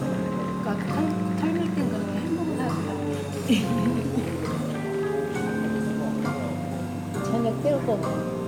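No technical faults are audible anywhere in the recording.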